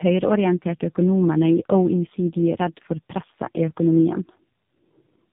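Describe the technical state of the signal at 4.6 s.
At 4.6 s the speech carries tandem speech coding, present throughout the clip. It was decoded and re-encoded by two low-rate speech codecs in turn, likely a G.729A stage and then AMR-NB. Nothing is heard above 3.7 kHz. Unlike a single narrowband codec, the roughness and warble compound, sounding more muffled and smeared than either stage would alone.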